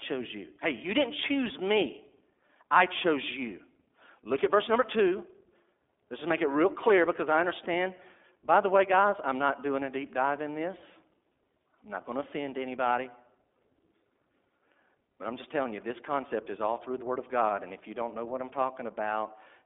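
Throughout, the speech has passed through the iLBC codec, likely in its 15.2 kbps mode with 20 ms frames, each coded independently. Only about 250 Hz to 3.6 kHz survives, nothing above 3.8 kHz, leaving a muffled telephone sound with a plainly audible rough, synthetic texture.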